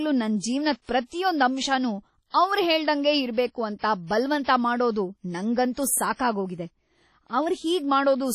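Heavy WMA compression affects the speech from start to finish. The sound rings and smears, and a hiss rises and falls with the signal. This likely comes from a transform codec running at a low bitrate, which fits about 32 kbps. Long coding blocks spread quantisation noise across tens of milliseconds around each sound. Weak spectral lines are dropped entirely, leaving a washy texture. Nothing remains above 15.4 kHz.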